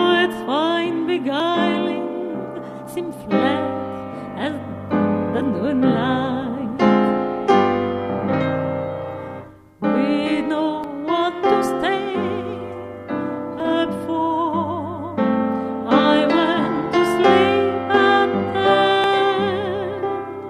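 The audio was most likely captured by a program that fell behind reading its input, so the hardware overwrote samples before they were collected: a dropped buffer (overrun). Each time, roughly 40 ms of audio is simply missing and the material on either side is butted together with no gap, heard as a sudden jump forward in the sound at 1.4, 10.84, 13.6 and 19.04 seconds.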